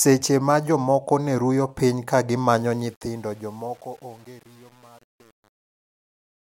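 A speech clip with truncation distortion on the fade-out: from 2.58 s, after "ruyo piny ka gi", the undithered tail turns gritty, worst from 2.85 s, which fits 8-bit truncation.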